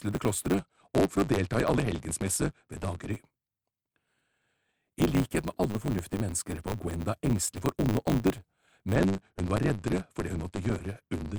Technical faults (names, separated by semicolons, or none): block size mismatch (truncated); Bluetooth SBC bit pool drop